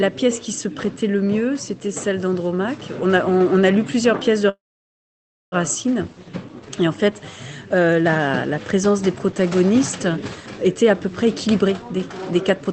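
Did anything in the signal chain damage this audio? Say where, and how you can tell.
Yes. At the network and jitter-buffer stage, a call audio freeze runs from 4.49 to 5.54 s, likely from packets stalling in transit until the buffer ran dry. The last sound is briefly stretched into a fading tail, then about 940 ms of silence, and the audio resumes exactly where it stopped, now roughly 1 s later.

The jitter buffer then sheds excess buffered audio with a jitter buffer speed-up from 10.75 s to the end at 12.72 s. It repeatedly cuts out pitch-period-sized slices, removing about 0.4 s in total, so the audio plays at 119% speed without any change in pitch and sounds rushed.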